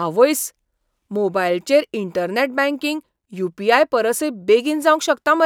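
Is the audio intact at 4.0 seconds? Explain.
Yes, the speech at 4.0 seconds plays through intact, with no audible dropout, click, distortion or other fault at that moment.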